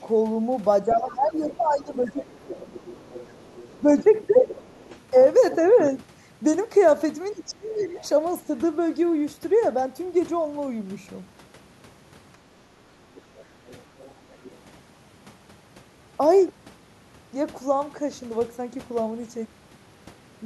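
Across the whole clip runs channel delay comb filtering. One channel arrives roughly a sixth of a millisecond behind the other, and summing them to mono cancels matching content at evenly spaced frequencies. The first notch sits around 3 kHz, with further notches spaced higher up. The speech sounds hollow and phasey. A spectrogram shows fixed dark horizontal bands at the same frequencies from start to finish.

From 0.83 to 2.75 s the talker's level sags by about 10 dB, in patches totalling about one and a half seconds. This is speech suppressed in double talk, most likely the echo canceller turning down the near talker because the far side was speaking at the same moment. A shallower dip of about 5 dB, lasting about a tenth of a second, falls between 3.82 and 4.49 s. From 7.33 to 7.97 s a deeper drop of about 20 dB takes out roughly half a second. The waveform envelope pinches in at each of these points.

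Overlapping these dips, from 0.93 to 4.89 s, a second voice sits about 20 dB under the talker. It returns briefly at 7.79 to 8.05 s and again at 13.15 to 14.58 s, about 30 dB down both times. This is the other side's voice leaking through, likely far-end loudspeaker sound that the echo canceller failed to remove. On a spectrogram it appears as faint, separate harmonic traces beneath the main speech.

At 12.93 to 13.04 s the room background drops by about 11 dB for roughly a tenth of a second and then returns. This is background gated by the echo canceller, which clamps the microphone hard while the loudspeaker plays. On the waveform it shows as a short notch in the noise floor. On a spectrogram it shows as a brief vertical gap across the background.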